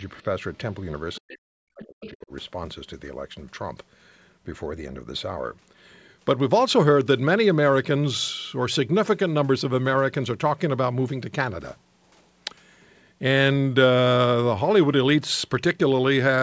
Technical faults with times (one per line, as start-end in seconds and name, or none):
1.15-1.19 other side's voice leaking through
1.19-2.32 speech suppressed in double talk
1.82-2.10 other side's voice leaking through